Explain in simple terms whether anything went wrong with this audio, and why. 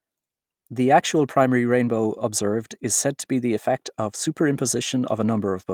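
Nothing went wrong with this recording: the speech signal stays steady and intact the whole way, with no technical faults at any point.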